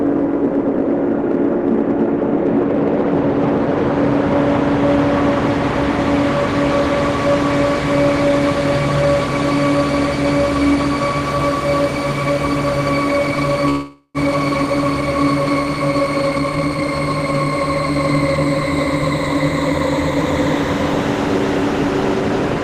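Hard clipping runs through the whole clip. The signal is driven about 6 dB past what one stage could pass, so the loudest peaks, a small share of the samples, are sliced flat. Each peak is heard as a short crackle. On a waveform the tallest excursions sit as flat plateaus at the same level. A spectrogram shows vertical streaks of harmonics reaching upward at those moments, stopping at the 12 kHz ceiling that the call codec's bandwidth sets across the clip.

From 13.69 to 14.18 s there is a call audio freeze, most likely caused by delayed packets emptying the jitter buffer. The receiver fills about 452 ms by stretching the last sound so that it fades, ending in roughly 80 ms of silence. When the packets arrive, the sound resumes where it left off, with nothing lost but a gap inserted. A spectrogram shows a smeared, repeating band that fades to blank. The waveform decays to a flat line.

Between 16.28 and 16.82 s the jitter buffer speed-up cuts the delay held in the buffer. 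It cuts out short pitch-period slices, about a third of a second in total, so the sound plays at about 159% speed without any change in pitch and comes across as rushed. On a waveform the events sit unnaturally close together. On a spectrogram they look compressed in time while their frequency bands stay at the same height.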